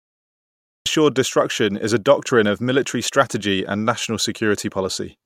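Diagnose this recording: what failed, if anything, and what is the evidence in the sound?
Cut-off start at 0.86 s: digital silence until then, with speech entering abruptly mid-sound at "destruction is a doctrine". Capture or stream began late, a recording-start or storage-stage fault.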